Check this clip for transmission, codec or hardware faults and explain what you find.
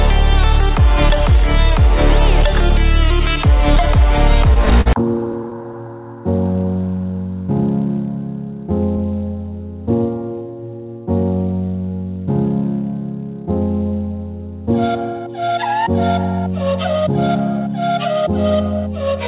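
One transmission fault is present. From 4.54 to 5.89 s there are repeated stalls (stutter): the jitter buffer kept running empty, so the receiver stretched the last sound through about a dozen short gaps, the longest 45 ms and 155 ms in total. On a spectrogram these show as brief smeared, repeated columns, and on the waveform as small looping segments. The band stops at 4 kHz, consistent with a narrowband call codec such as G.711.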